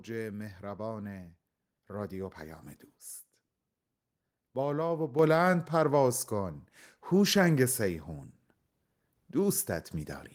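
Speech clip. At 5.19 s the microphone volume stepped up by about 7 dB in one jump. Voice and background noise rise together, showing software raised the input gain.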